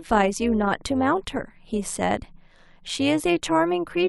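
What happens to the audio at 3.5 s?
At 3.5 s the speech carries overlap-add ripple, present throughout. Frames rejoin with uneven gain, so level dips about 6 dB around 150 times a second, a metallic buzz.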